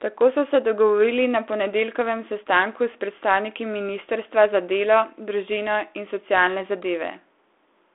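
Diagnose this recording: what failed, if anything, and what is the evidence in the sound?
Nothing has failed here; the speech comes over a G.726 telephone path at 32 kbit/s, with the usual narrow line band of about 300 Hz to 3.5 kHz and nothing above 3.8 kHz, just as that kind of link should sound.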